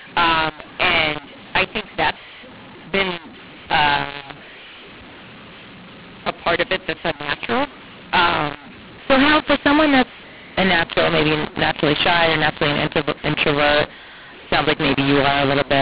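Throughout the clip, speech coded as G.711 A-law is decoded as mu-law, a case of mu-law and A-law mixed up. The two logarithmic laws map the 8-bit codes to levels differently, so every sample comes back at the wrong level. Some are too loud, others too soft, and the quietest are lifted well above silence. The speech sounds harsh and distorted, and the pauses fill with noise, all within the 4 kHz telephone band.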